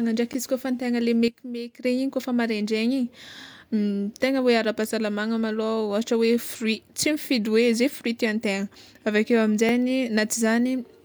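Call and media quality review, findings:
Repeated buffer, 0.33–0.35 s and 9.69 s: playback device starved of new audio and replayed its last block, which fits a 10 ms buffer. At 0.33 s the block sounds twice more, at 9.69 s once more, with hard joins, so the speech gives a brief buzzy stutter. Nothing is dropped.

Sudden gain jump, 1.28–1.85 s: level drops by about 12 dB instantly, speech and background noise together, with an abrupt edge, just before "re igny kôfa". The likely cause is a digital gain setting applied without a ramp.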